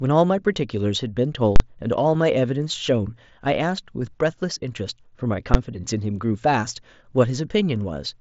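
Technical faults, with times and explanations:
1.56–1.60 s and 5.54 s, invalid numbers at full scale: The first is a very loud pop at 1.56 s and another at 1.60 s with silence between; the second is a single bang. A calculation produced invalid values, pinning the output at one extreme value for 40 ms, then 10 ms.
2.14 s, concealed Bluetooth headset packet loss: A barely noticeable smear of about 7.5 ms, which fits a single lost headset frame. The receiver filled the gap by repeating the best-matching recent waveform, hiding the loss.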